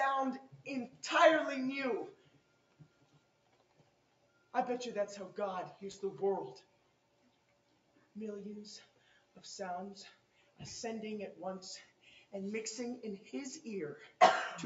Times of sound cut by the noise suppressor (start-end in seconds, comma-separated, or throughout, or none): 0.40-1.03, 2.12-4.54, 6.61-8.15, 8.85-9.40, 10.12-10.60, 11.84-12.33